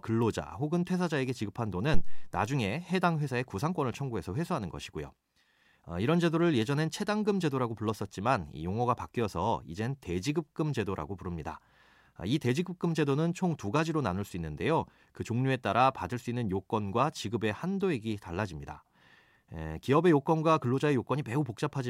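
At 1.94 s, a phantom power thump: a supply step through coupling capacitors gives a deep, speech-independent thump, unlike a plosive, decaying within 90 ms.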